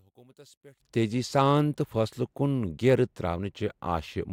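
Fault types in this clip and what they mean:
Likely one channel inverted: from 0.0 to 0.8 s the speech nearly vanishes in mono, dropping about 29 dB as reversed polarity cancels the shared centre signal.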